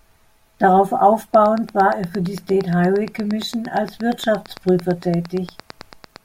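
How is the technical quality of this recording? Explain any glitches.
The quality is compromised by a train of clicks. From 1.34 s to 6.17 s, around forty evenly spaced, similar pops tick over the speech and its pauses at about 8.7 per second, peaking about 5 dB above the speech. The likely cause is electrical interference from nearby equipment or a faulty connection or power supply injecting a pulse at a steady rate.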